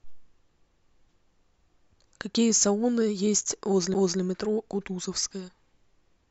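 At 3.94 s the speech is interrupted by a CD skip: the laser jumps to another turn of the disc's spiral, and the player mutes for roughly 10 ms. The result is a tick and an abrupt jump in the speech, rather than a plain dropout that would simply leave a gap.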